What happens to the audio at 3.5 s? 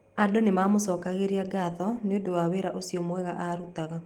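At 3.5 s the speech runs on intact, with no dropout, click or other fault at that moment.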